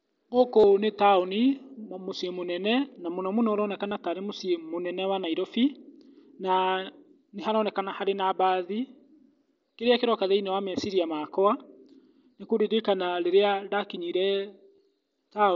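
Brief buzzy, held-pitch patches at 0.60–0.64 s before "nĩ taũni", at 3.88–3.92 s after "na mũno mũno ũroneka", and at 14.76–14.78 s after "nĩ kũririkanĩ rĩrĩa ndakinyire" are concealed Bluetooth headset packet loss. Headset packets dropped, and the phone filled each gap by repeating recent waveform.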